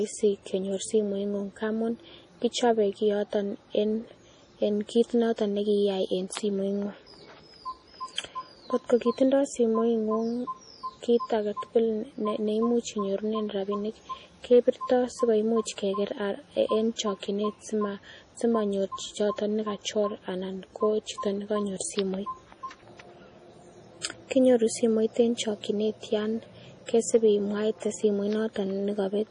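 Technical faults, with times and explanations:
Throughout: MP3 compression. Nothing survives above 10.6 kHz, and the sound has a watery, swirling quality from weak frequency lines dropping in and out. The heavy damage fits a bitrate around 32 kbps. The likely cause is bit starvation in the encoder.
14.52–14.69 s, 25.20 s and 27.15 s: hard clipping. The first comes just after "inyorunen rabinik". Peaks were pushed about 1 dB past the limit in the first two and about 2 dB in the third. The flattened tops add upper harmonics, heard as crackle.
15.65 s, 16.96–16.99 s and 24.01–24.04 s: pre-echo. A short hiss leads each attack, spreading 17 ms, 29 ms and 35 ms respectively. Codec noise sized for the loud onset leaks into the quiet just before it, so each attack sounds softened and smeared.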